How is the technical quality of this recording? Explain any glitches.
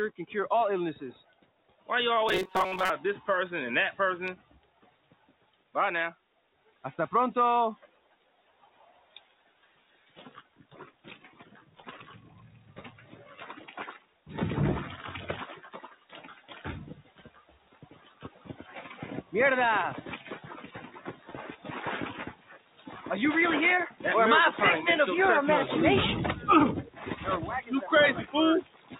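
The recording has clear processing problems: a speech noise suppressor works against the material the whole way through, and there's one short stretch of robotic buzz. It all comes through a narrowband call path, which fits G.711 at 64 kbps, so nothing reaches above 4 kHz.

The main issue is a noise suppressor applied to music or sounds. It's a speech-tuned suppressor, and it treats sustained tones, ambience and decays as noise to be removed. Its gain keeps moving, with swings of around 15 dB, so the sound pumps and thins while attacks mostly get through.

The sound is cut by the noise suppressor at 1.24–1.88, 4.38–6.84, 7.81–11.82, 13.98–14.26, 15.91–18.64, 20.94–21.65, 22.33–22.87, and from 28.26 to the end. In each of these the held or fading material sinks by about 9 to 12 dB, and tails get clipped short.

From 2.29 to 2.91 s the sound turns rigid and metallic, with a buzz at 188 Hz over most of that stretch. 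This is likely robotic sound from repeated short buffers: roughly 5.3 ms of audio gets replayed while the real signal is skipped.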